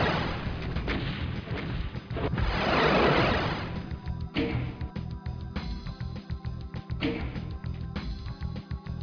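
No technical faults can be heard anywhere in the recording.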